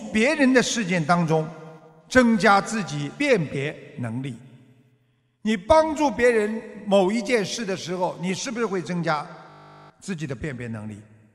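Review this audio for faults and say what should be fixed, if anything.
System hang loop, 9.5 to 9.9 s: a 20 ms slice of audio repeats twenty times, giving a steady 50 Hz buzz where about 400 ms of sound is lost. To prevent it, fix the driver or system stall so the audio buffer keeps being refilled, and add a watchdog that mutes output when refills stop.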